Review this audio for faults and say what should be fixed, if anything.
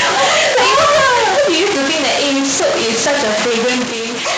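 Stuck bit, throughout the clip. A distortion rides on the speech from start to finish, and the pauses are filled with noise rather than falling silent. The likely cause is one data bit held permanently at 0 or 1 by a broken line or converter. Roughly half the samples then land off by that bit's weight, so the error follows the waveform, and even tiny values near silence flip by a fixed amount. Repair or replace the faulty interface or cable.

Microphone overload, from 0.78 to 0.98 s. For these 0.2 seconds the loudest syllables take on a crackling, harsh edge, with the peaks pushed about 4 dB beyond full scale. The input gain was likely set too high, so the converter hit its ceiling and flattened the tops of the waveform. Only a small fraction of samples are affected, under one percent, but they fall on the strongest moments. Set the microphone input level with enough headroom that peaks stay below full scale.

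Microphone volume stepped down, at 3.84 s. Speech and background both drop abruptly by about 5 dB in a single step, with no gradual fade. This is likely the call software detecting an over-loud or clipping input and cutting the device's input volume in one jump, leaving an audible level discontinuity late in the clip. Disable automatic input-gain adjustment and set a fixed, correct level beforehand.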